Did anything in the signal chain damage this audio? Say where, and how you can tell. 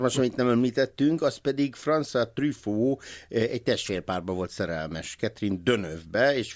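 No, nothing along the chain has audibly damaged this speech recording, and the signal stays continuous and intact at every stage a listener can judge.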